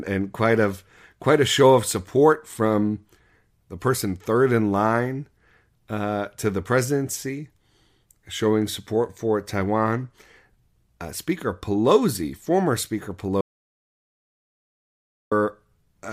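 At 13.41 s the speech cuts off abruptly and the track falls to silence until 15.32 s, when it resumes mid-flow. This is an audio dropout to silence lasting about 1.9 s, with no room tone or noise floor in the gap. The input was likely lost for that stretch, through a disconnection or mute, while the recorder kept writing silence, so whatever was said then is missing entirely.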